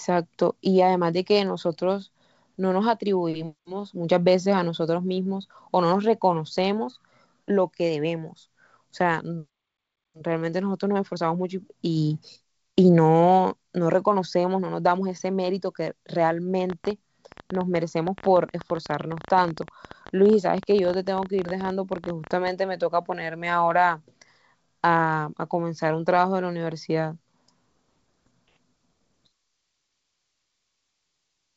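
From 16.7 to 22.49 s there's a train of clicks: around seventy similar pops at about 13.3 per second, irregularly spaced, peaking a little above the speech and ticking through the pauses too. Likely interference from nearby gear or a faulty connection, over light G.722 coding.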